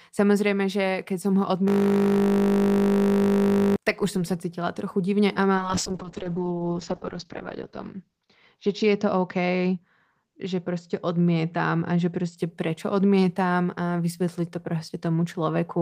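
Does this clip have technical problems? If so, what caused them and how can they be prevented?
Yes. From 1.68 to 3.76 s a system hang loop repeats one 20 ms slice, giving a 50 Hz buzz. The waveform shows identical repeating cycles, and the spectrogram shows harmonics spaced 50 Hz apart. Keeping audio drivers updated and giving the audio thread real-time priority prevents such stalls.

From 5.57 to 12.43 s a call bitrate drop from 32 to 7 kbps makes the sound rough and muffled, worst for about 1.85 s. The spectrogram's upper band falls from 20 kHz to 8 kHz. A stable network connection and a minimum bitrate floor on the encoder prevent this.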